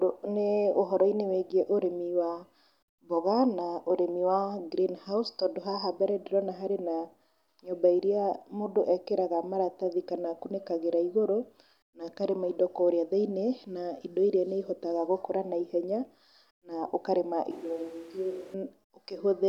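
At 17.51 s, right after "na ũkarĩma", the speech suddenly turns hollow and roomy, loses its low end, and drops by roughly 10 dB, while background noise rises to only about 25 dB below the speech. At 18.54 s the close sound snaps back. This is likely a switch to a distant microphone. A plain gain dip or a low-cut filter would not add room reflections or raise the noise floor this way.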